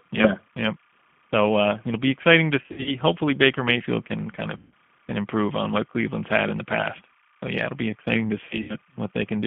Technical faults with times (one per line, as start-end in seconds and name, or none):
0.00-9.47 timecode bleed
0.00-9.47 G.729 codec
2.62-2.92 VoIP packet loss concealed by the speech codec
4.57-4.72 VoIP packet loss concealed by the speech codec
8.45-8.76 VoIP packet loss concealed by the speech codec